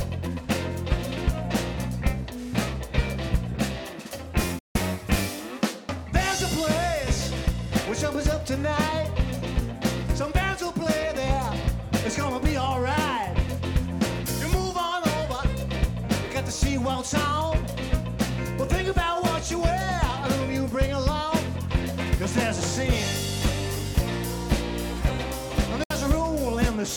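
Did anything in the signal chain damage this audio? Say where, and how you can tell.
Yes. Two digital broadcast dropouts at the reception stage: the sound fades out within about 3 ms and stays silent from 4.59 to 4.76 s and from 25.84 to 25.91 s. The gaps suggest roughly five and two lost 32 ms frames. The receiver muted until valid frames returned, so that audio is gone.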